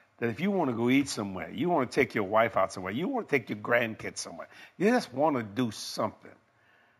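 A speech clip with imaging from linear upsampling throughout: the top of the band is dulled, and a faint mirrored copy, roughly 30 dB down, shimmers metallically on sibilants. It points to straight-line interpolation from a 16 kHz rate to 48 kHz. A spectrogram shows the speech spectrum flipped into 8 to 16 kHz.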